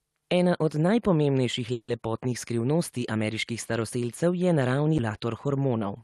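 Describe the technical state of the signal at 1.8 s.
At 1.8 s the signal is inside a call audio freeze running from 1.72 to 1.89 s, likely caused by packets stalling in transit so the jitter buffer ran dry. The receiver bridges the wait by stretching the last sound after "od najpomembnejših" into a fading buzz lasting about 160 ms. When the packets arrive, playback resumes exactly where it paused with "lepotnih skrivnosti ameriških". Nothing is lost, but the rest of the audio is now 160 ms later.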